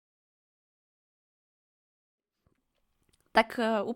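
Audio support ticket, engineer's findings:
No faults found.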